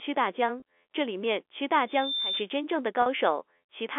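At 0.60 to 0.62 s the speech briefly freezes into a slightly buzzy, held sound. This is packet loss with pitch repetition: about 20 ms of audio went missing, which fits a single lost packet, and the receiver filled the gap by repeating the last pitch period. A second, longer gap of about 40 ms at 3.02 to 3.06 s sounds the same, with the held buzz lasting longer and fading out. The audio then resumes through a short cross-fade. That length suggests two consecutive packets were lost.

From 1.87 to 2.47 s a loudspeaker feedback squeal rises at 3.6 kHz. The microphone is picking up its own loudspeaker, and at that frequency the loop gain has passed one, so the tone feeds on itself. It swells over roughly 0.3 s to around 5 dB above the speech before it stops. The squeal sits just above the telephone band, which runs from about 250 Hz to 3.5 kHz on this G.711 mu-law line.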